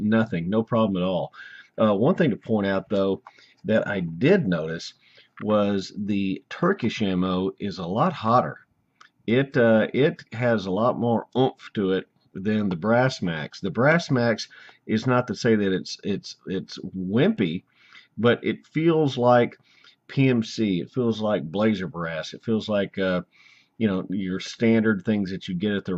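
Nothing here catches the ear as a technical fault, so there's no moment in the audio worth flagging.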